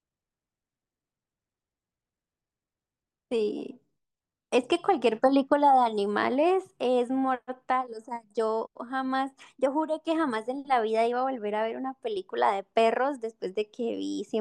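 Speech with no technical faults.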